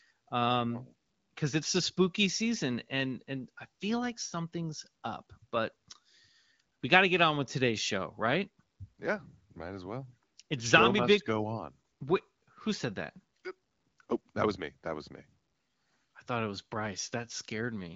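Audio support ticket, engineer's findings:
No fault found in the speech: the AMR wideband (HD Voice) path is working, with content ending near 7.5 kHz and only light coding texture, consistent with a rate around 15.85 kbit/s.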